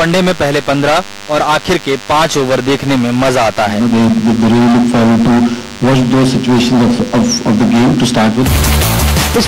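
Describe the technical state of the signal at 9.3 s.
At 9.3 s, DECT cordless phone buzz sits under the sound. It is not a local event. It runs unchanged through the whole clip. A nearby DECT handset or base station transmits a short radio burst every 10 ms. The audio circuitry rectifies that burst, so its 100 Hz repetition rate turns into audible sound. The result is a steady, thin buzz at 100 Hz with a dense row of harmonics. It sits about 20 dB below the signal.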